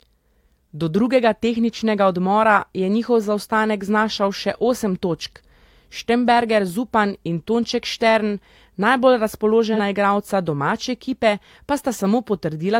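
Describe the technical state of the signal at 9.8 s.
At 9.8 s the speech runs through AAC frame loss with concealment, spanning 9.74 to 9.80 s. About 43 ms of coded audio is missing, which fits a single lost AAC frame. The decoder covers the hole by reusing the last good spectrum with randomised phase, so the patch sounds briefly smeared and noisy rather than silent. Unlike a plain dropout or buffer gap, there is no hard cut to silence, and the loss is too short to fade down and back.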